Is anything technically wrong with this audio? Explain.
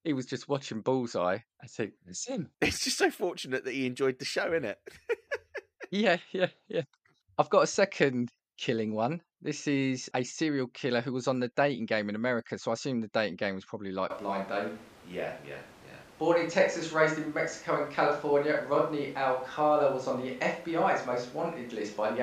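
Yes. From 14.1 s to the end, the sound changes character abruptly, most likely a switch to a distant microphone. The close microphone's feed appears to drop out, and a pickup farther from the talker takes over, so much more of the room reaches the recording relative to the direct speech. The speech turns roomy and hollow at once, with thinner bass. The overall level stays about the same, while room noise rises to roughly 25 dB below the speech.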